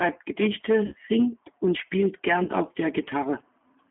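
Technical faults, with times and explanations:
Throughout: G.729 codec. The speech is squeezed into a phone band of roughly 150 Hz to 3.4 kHz, at 8 kbit/s. The damage is plainly audible: a rough, slightly synthetic edge, because each short frame is rebuilt from a vocal-tract model and a few pulses rather than the real waveform.
0.86–0.95 s and 2.44–2.49 s: VoIP packet loss concealed by the speech codec. About 60 ms and then 30 ms of audio go missing, which fits two packets and then one. The decoder fills each gap by stretching its last pitch and filter into a buzzy tone or coloured noise that fades, and the sound stays weak or distorted for tens of milliseconds or more after, while the frames rebuild.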